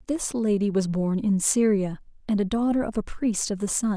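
Speech recording; no technical faults to report.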